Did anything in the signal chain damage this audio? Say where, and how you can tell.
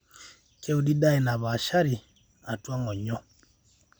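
No, nothing in the signal chain left an audible mark on this speech. Every stage it passed through can be followed without any sign of trouble.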